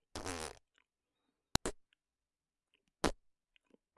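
At 1.55 s a sharp, loud click snaps through. It's a file header played as audio: leftover header bytes from a joined piece, reproduced as samples.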